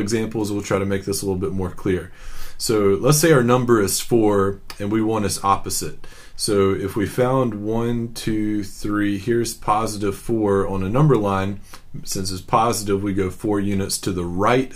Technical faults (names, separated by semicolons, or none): none